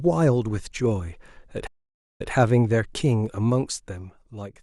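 At 1.67 s a stream reconnect occurs. The connection drops, the player goes silent, then reconnects and starts a fresh decoder mid-stream. About 0.49 s of silence follows, and when the speech returns near 2.31 s it has jumped back by about 0.14 s, repeating a fragment.

From 3.14 s to 4.53 s there is zipper noise. The level is lowered in 2 dB steps without smoothing, around four steps a second, falling by roughly 10 dB overall. Each abrupt step leaves a small click, so a ticking rides on the speech as it fades.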